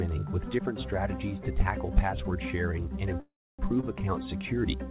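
A call audio freeze runs from 3.2 to 3.6 s. For about 0.39 s the sound stops moving forward. The last fragment is carried on briefly as a fading buzz or hiss, and then about 0.29 s of near silence follows. The likely cause is packets held up in transit, which let the jitter buffer run dry. When the packets arrive, playback resumes exactly where it left off, so almost nothing is lost and the rest of the clip is simply shifted later.

A short stall from a late packet follows at 3.81 to 3.84 s. One packet was not ready when it was due, so the receiver stretched the preceding sound by about 23 ms to cover the wait. It then picked up from the same point once the packet turned up. Nothing is missing, but that moment is held slightly too long, with a faint buzzy catch or dip. The narrowband call path is audible throughout: nothing reaches above 4 kHz, which fits G.711 mu-law coding.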